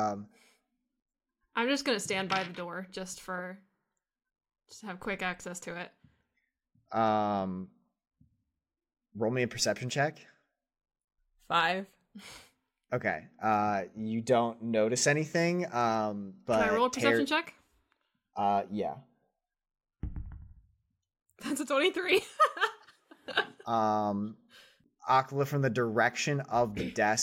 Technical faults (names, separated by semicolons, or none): none